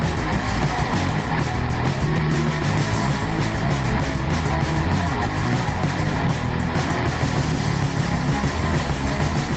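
A music recording with gain pumping throughout: the level rises in the quieter gaps and ducks by around 5 dB under each loud hit, likely from gain set far too high with a fast limiter clamping down. A waveform shows a flattened, squashed envelope, and a spectrogram shows the background brightening between peaks. The content stops at 8 kHz, as expected from a call path.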